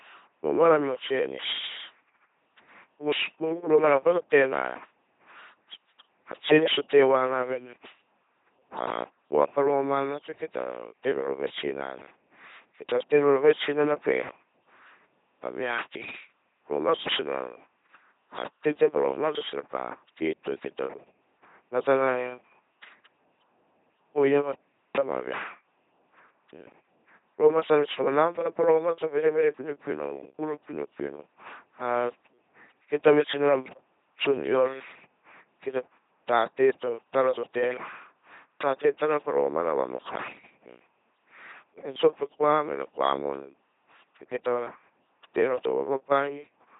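Throughout, heavy LPC-10 vocoder damage rebuilds the speech from a ten-pole filter driven by either pulse buzz or noise, which fits a 2.4 kbit/s rate. It sounds robotic, with stray buzz and hiss. A spectrogram shows harmonic combs, noise blocks, and nothing above 3.8 kHz.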